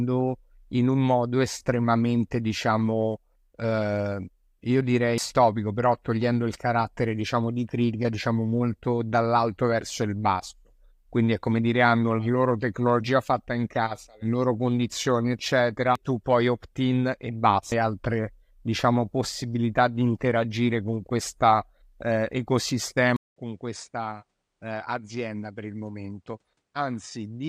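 At 5.18 s, 15.95 s and 17.72 s the speech is broken by brief chirps or blips, just before "però togliendo il carattere", "tu poi" and "altre diciamo possibilità di". This is damaged data in a compressed stream: the decoder hits corrupted bytes, loses frame sync and jumps to the next header.

From 23.16 s to the end the character changes abruptly after a gap of 200 ms. Nothing above 10.5 kHz remains, so the sound turns dull and boxy. The level falls by about 10 dB, and a new background noise sits roughly 50 dB below the signal. The likely cause is an input switched to a poorer device. A codec's bitrate dropping would narrow the band without that silent gap, the level step and the fresh noise floor.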